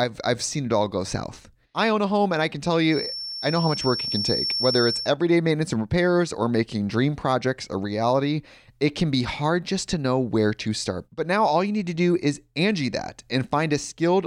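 From 2.85 s to 5.14 s, a thin, steady whistle near 5.4 kHz sits behind the speech, wavering slowly in level and staying only a little quieter than the talker throughout. This is a feedback whistle. The likely cause is a loudspeaker-to-microphone loop poised right at the edge of feedback, where the gain at that one frequency is just enough to keep the tone ringing on, yet not enough for it to build into a runaway howl.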